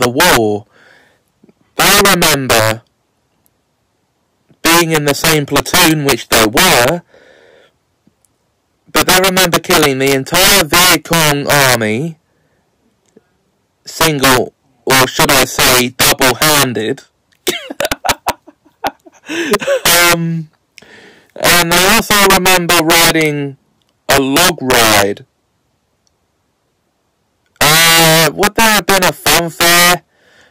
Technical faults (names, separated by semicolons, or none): integer overflow